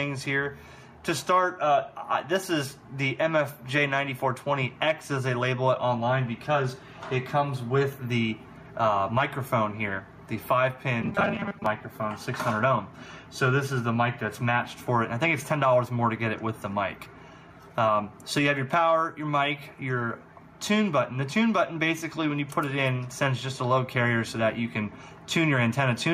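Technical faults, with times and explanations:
Throughout: gain pumping. The input gain was likely set far too high for the microphone, so a fast limiter or compressor keeps pulling the level down whenever a loud sound arrives and lets it recover afterwards. The level swings by about 5 dB as this happens, so the sound audibly rises and ducks with its own loud moments, and the gap between loud and soft parts is squeezed, leaving a flattened, squashed quality.
11.02 to 11.66 s: robotic sound from repeated short buffers. Fresh audio was likely reaching the playback side too seldom, so the software covered the shortfall by looping the most recent short stretch while real material was dropped, with roughly half of this passage made of repeats. The loops recur at 200 Hz, which fits a buffer of about 5 ms, and that fixed rate imposes a rigid metallic buzz that only loosely follows the original.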